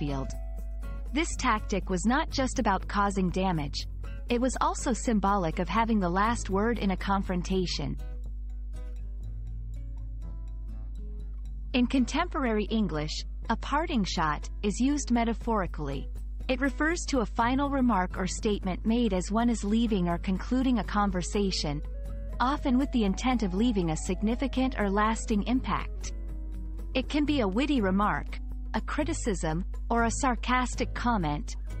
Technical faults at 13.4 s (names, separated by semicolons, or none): mains hum